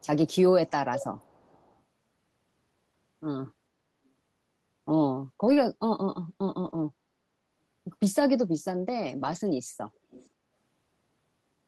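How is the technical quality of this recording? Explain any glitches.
The recording has two kinds of glitch: brief faint echoes and short rough patches where lost audio was rebuilt. The call path's Opus coding limits the top end to about 12 kHz, which fits a bitrate around 24 kbps.

Echo leak: From 0.00 to 0.06 s, a delayed copy of the speech sits roughly 40 dB down, 432 ms behind. From 10.11 to 10.28 s, a louder one, about 25 dB down, trails by 484 ms. The likely cause is a loudspeaker on the far end whose echo canceller let some pickup through. A single distinct repeat at a fixed delay distinguishes it from room reverberation, which smears continuously.

Lost packet rebuilt from error correction: At 5.47 to 5.49 s and at 8.19 s, 20 ms stretches sound briefly grainy. From 6.65 to 6.83 s and from 9.19 to 9.37 s, 100 ms stretches do the same, which fits runs of five lost packets. The decoder played low-bitrate backup copies carried in later packets, so the sound roughens but never drops out. 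A concealed loss without such backups would instead smear or fade toward silence.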